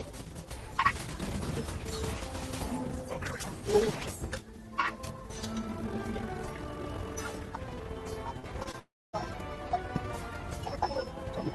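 Around 8.39 to 8.46 s, then at 8.64 to 8.67 s and 8.71 to 8.75 s, the sound briefly smears and wobbles. This is short concealed packet loss: about 40 ms, then two gaps of about 20 ms each, never arrived in time. The receiver covered each gap by extending the preceding sound before blending back.

From 8.79 to 9.15 s the sound stretches into a fading buzz-like continuation. It then drops to silence for roughly a quarter of a second before returning, with about 340 ms missing. This is a long network dropout, likely a stall in packet delivery that concealment could only bridge briefly. The sound comes through a call codec whose top end stops near 12 kHz, which fits Opus at around 24 kbps.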